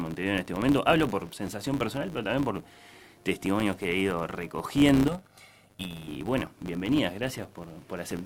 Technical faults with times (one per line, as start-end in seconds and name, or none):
0.00-8.25 filter restarted on every block
5.08-6.08 channel delay (comb filtering)